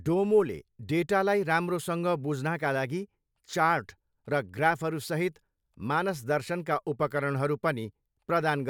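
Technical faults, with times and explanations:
No technical faults can be heard in the speech.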